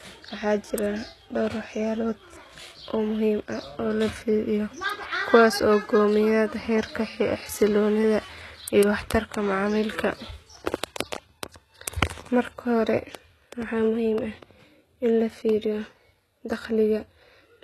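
Throughout, likely HE-AAC compression at a low rate near 16 kbps: rebuilt treble sounds gritty and lispy on s sounds, and a spectrogram shows copied bands ending at 12.3 kHz.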